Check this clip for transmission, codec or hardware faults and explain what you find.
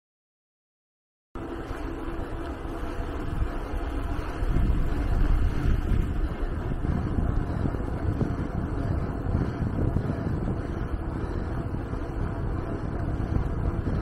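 One fault is present. A cut-off start: digital silence runs from 0.0 to 1.35 s. The sound then begins abruptly mid-event. Capture started late, so there is no natural attack.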